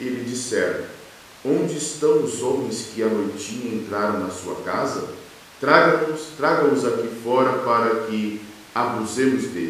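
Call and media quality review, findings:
No faults found in playback.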